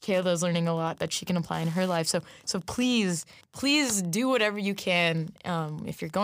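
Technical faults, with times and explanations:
Throughout: Wi-Fi interference, a faint steady ticking about ten times a second under the speech, roughly 30 dB below it. A nearby Wi-Fi radio's beacon, sent every 102.4 ms, is being picked up and rectified by the audio circuit, turning each radio pulse into an audible tick.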